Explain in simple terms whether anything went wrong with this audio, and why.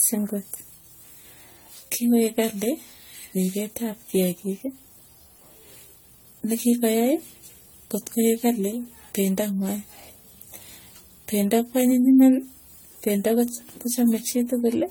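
Generation loss likely affects the whole recording: it sounds as if the speech was squeezed by a lossy codec and re-saved about seven times over. Each pass added fresh damage, so the audio sounds swirly, hollow and smeared, and sharp sounds lose their crispness.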